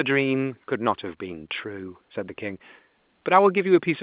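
Nothing stood out on listening to the speech, which comes across with the narrow band expected of ordinary telephone coding.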